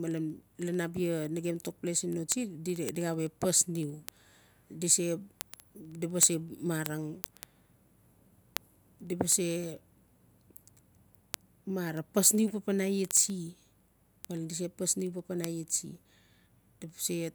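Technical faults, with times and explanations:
0.11–17.34 s, word clock ticks: a steady patter of sharp, uneven ticks about every 70 ms, a few hundred in all, under the speech. The receiver wasn't locked to the sender's clock, a mismatch of roughly 400 ppm, so each slip drops or repeats one sample.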